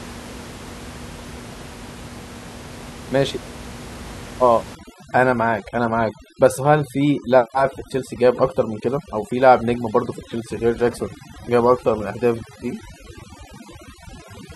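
A noise reduction stage set far too aggressively takes over this speech recording from 4.75 s to the end, the classic case of overdone noise removal. It pulls individual frequency bands right down whenever they sit close to its noise estimate, so the room noise, about 17 dB below the speech before that point, drops and breaks up into twinkling specks, while quieter parts of the voice are stripped away too.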